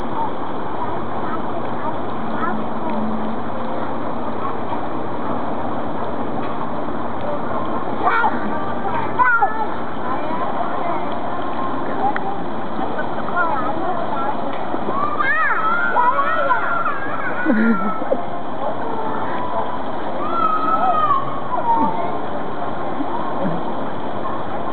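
A hollow, phasey dullness runs through the whole recording, with a fixed notch carved out around 3 kHz. That is channel delay causing comb filtering: one channel lags the other by a fraction of a millisecond, so summing to mono cancels evenly spaced frequencies.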